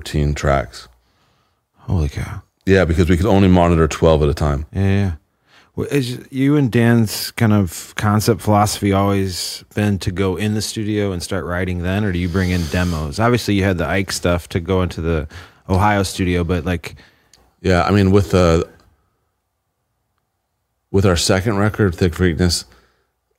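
No technical faults are audible in this speech recording.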